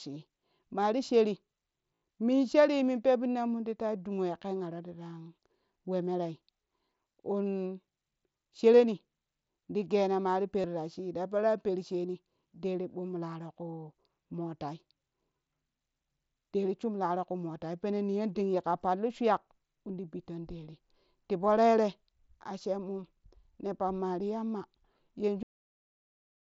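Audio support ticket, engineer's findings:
Concealed Bluetooth headset packet loss, 1.95–2.01 s: buzzy, flat-level tone for about 67.5 ms, slight warble as real audio resumes. This fits roughly nine lost 7.5 ms headset frames, filled by repeating the best-matching recent waveform. Second event at 10.62 s, 22.5 ms. Differs from a dropout because level holds instead of falling to silence. Light mSBC graininess around it is the codec's normal character.

Cut-off end, 25.43 s: audio stops mid-sound and falls straight to digital silence with no decay, held to the end of the file. Final playback or write buffers never completed. Differs from a fade or natural ending because there is no tail at all, and from a dropout because the audio never comes back.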